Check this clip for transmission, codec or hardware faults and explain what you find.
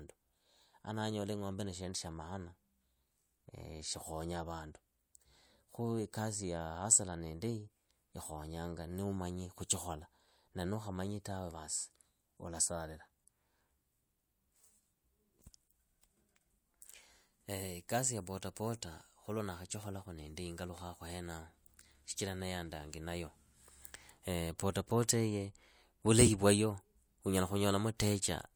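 No transmission, codec or hardware faults are audible in the clip.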